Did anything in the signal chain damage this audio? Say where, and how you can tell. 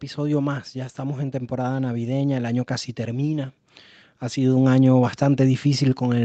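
Yes. The damage happens in the call processing stage, where automatic gain rising lifts the level twice. From 0.15 to 3.55 s, the speech and the background noise swell together, climbing by about 8 dB. The same slow rise starts again at 4.28 s and runs to the end. The gain control judged the input too quiet and raised its gain gradually. Because the noise floor rises along with the speech, this is a gain change, not a louder talker.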